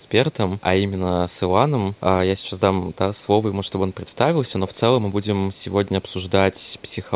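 Speech over a call path, heard with the narrow, band-limited sound of a phone line that stops near 4 kHz, carries two brief, faint repeats of the talker, at 4.68–4.75 s and 6.76–6.82 s. Each trails by 418 ms. The first sits about 25 dB below the speech and the second about 40 dB below. This is echo leak, likely from a loudspeaker at the far end whose echo canceller let part of its microphone pickup travel back.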